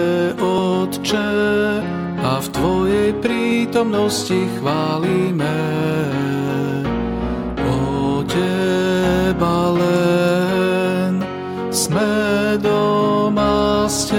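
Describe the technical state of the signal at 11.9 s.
At 11.86 s there is an abrupt forward jump in the sound. There is no gap of silence. The material on either side is butted directly together, with roughly 20 ms missing. This is likely a dropped buffer (overrun): the capture software failed to read a block of samples before the hardware wrote over it. That block was lost, and the recording resumed from the next one, joining two non-adjacent points.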